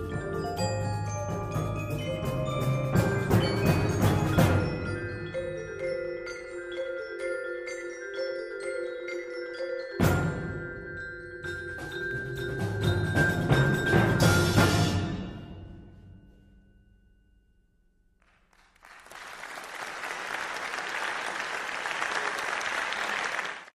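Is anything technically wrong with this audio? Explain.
Yes, there are two sharp single clicks, at 12.11 s and 21.00 s. These are likely dropped samples: a handful of samples, around a tenth of a millisecond, go missing, so the waveform jumps abruptly. That's far too brief to lose any audio, just a tick.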